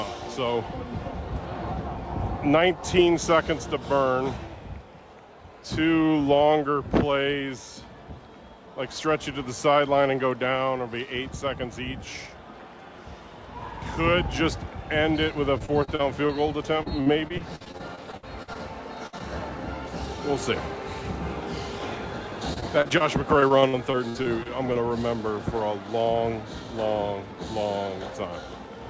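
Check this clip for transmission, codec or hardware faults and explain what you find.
The clip has packet loss in several forms, all concealed by the receiver, heard through a call path whose content stops at 8 kHz, which fits G.722 at 64 kbps.

Repeated packet loss (robotic sound), 15.58–16.31 s, 16.83–18.57 s, 22.54–23.02 s and 23.40–24.77 s: packets kept arriving late or not at all, with gaps up to 59 ms patched by extending prior audio. The result is choppy, robotic sound with pieces missing.

Burst of packet loss, 19.07–19.15 s: about 60 ms of consecutive packets never arrived, so the last sound was stretched and faded. You hear a held buzz or hiss, then a jump forward.

Short concealed packet loss, 19.19–19.22 s: roughly 20 ms failed to reach the decoder in time and was filled with synthesized continuation. It is heard as a brief smear or wobble.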